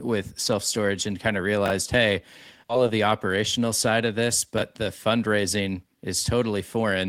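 At 2.69 to 2.71 s there is a skip ahead. Roughly seven tenths of a second of audio was discarded while later audio was already queued, either lost in transit or thrown out by an overflowing jitter buffer. Nothing fills the gap, and playback drops its latency by about the same amount. The speech jumps forward abruptly, with the two sides spliced almost directly together just before "of the operational side", so a chunk of the sentence is simply missing.

From 4.85 to 6.84 s a jitter buffer speed-up follows. The buffer was holding more audio than its target, so the receiver repeatedly cut out short pieces a pitch period or a few long, removing around 150 ms in total. The speech plays about 7 percent fast across that stretch while its pitch stays the same, so it sounds slightly rushed, as though the talker briefly quickened.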